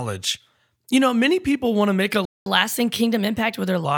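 At 2.25 s the speech cuts out in a playback stall, silent until 2.46 s, a gap of about 0.21 s. The player likely ran short of data or was blocked. On a waveform this is a flat line; on a spectrogram, a blank vertical band.

From 2.46 s to 3.85 s comes catch-up at higher speed. The player resamples its backlog at 1.15 times normal speed, so the speech hurries and rises roughly two semitones. A spectrogram shows harmonics shifted upward and compressed in time before they settle back.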